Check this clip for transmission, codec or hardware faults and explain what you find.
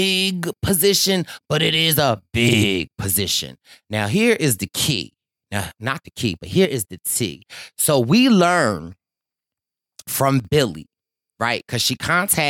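Two brief dips in loudness interrupt the speech. The first runs from 6.65 to 7.16 s, right after "the key but here", and the second from 10.40 to 10.45 s. In each, the sound suddenly drops by about 6 dB, then snaps back. The likely cause is one channel dropping out: with one side of the stereo pair lost, folding to mono keeps only half of the shared signal, and anything carried only in the missing channel vanishes.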